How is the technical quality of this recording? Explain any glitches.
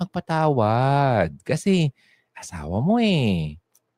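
No glitches or technical faults can be heard anywhere.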